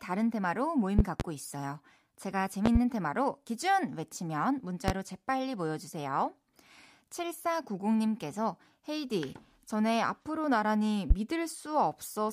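Sharp loud pops jump out about 20 dB above the speech, which continues underneath: double pops at 0.99–1.23 s and 2.66–2.78 s, single pops at 4.88–4.91 s and 11.10–11.14 s. The likely cause is a sudden voltage pulse entering the signal path.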